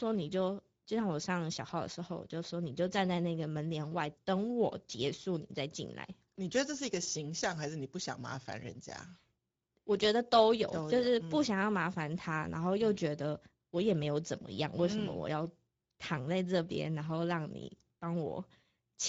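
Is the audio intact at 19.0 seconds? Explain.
No. The whole clip passes through a Speex codec, and its sound points to a bitrate around 16.8 kbps, too few bits for the excitation to model the voice faithfully. At 19.0 seconds the speech sounds noisy and hoarse, with nothing above 7.7 kHz.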